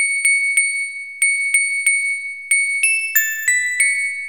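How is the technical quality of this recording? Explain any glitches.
One fault is audible. From 2.41 to 3.91 s, sample clock jitter of around half a microsecond mistimes the samples, adding a hiss-like roughness about 35 dB below the signal that rises on steep, loud passages.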